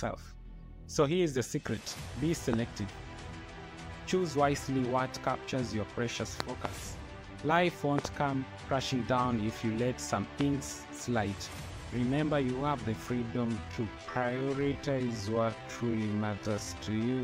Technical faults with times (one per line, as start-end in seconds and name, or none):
2.53-2.55 loud pop
6.40-6.67 loud pop
7.98-8.07 loud pop
10.41-10.43 loud pop
13.19-17.23 time-stretched section